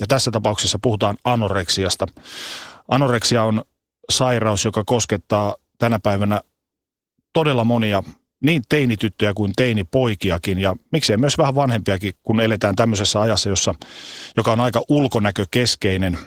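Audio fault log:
Throughout, Opus voice compression: speech sounds hoarse and a bit robotic, like hybrid-mode Opus near 16 kbps, with coarse excitation coding roughening everything, plainly audible.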